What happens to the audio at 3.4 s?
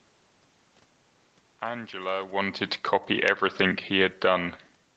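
At 3.4 s, automatic gain falling is under way. From 2.33 s to 4.4 s the gain control judges the input too loud and eases its gain down by about 4 dB. The speech and its room background sink together, gradually rather than abruptly.

Automatic gain rising has just begun at 3.31 s and runs to 4.65 s. Here the control reverses, finding the input too quiet, and lifts its gain by about 4 dB. Voice and background swell back up together over more than a second.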